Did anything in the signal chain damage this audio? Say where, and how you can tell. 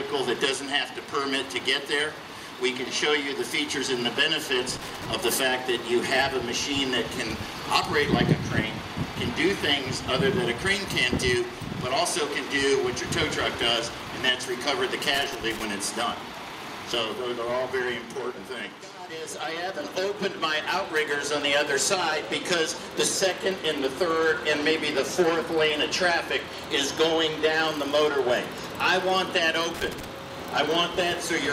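Yes. Irregular crackling bursts at 4.76–5.06 s, 15.14–15.64 s and 29.74–30.10 s are loose connector crackle in the analogue wiring, where a worn contact briefly chops the signal.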